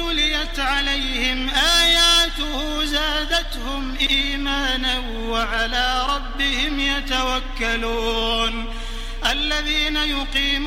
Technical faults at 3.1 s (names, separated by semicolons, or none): none